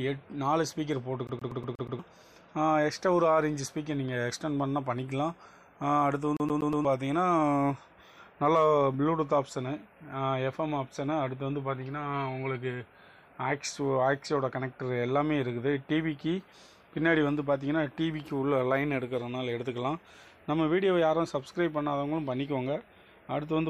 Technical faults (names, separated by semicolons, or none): CD stuck on one turn